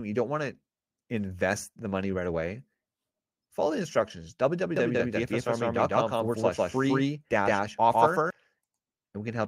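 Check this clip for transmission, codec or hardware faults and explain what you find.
One fault is present. A doubled audio track runs from 4.76 to 8.30 s, just after "follow the instructions". A second full-band copy of the speech trails the original by around 150 ms at roughly equal level, likely from a slower capture path recording it twice. It starts and stops abruptly, with no decay or room colour.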